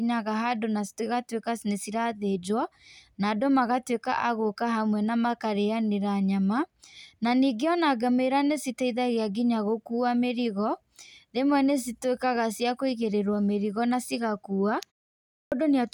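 At 15.28 s, right after "na cigakua" and a pause of about 0.45 s, there is a clipped start after a pause: the output device has dropped into a low-power state during the silence and needs time to wake and resynchronise, so roughly 240 ms of the next speech, up to 15.52 s, is lost. The speech bursts in abruptly with its opening sounds missing. On a waveform, flat silence jumps straight to signal with no onset ramp; a spectrogram shows a hard vertical edge where energy begins.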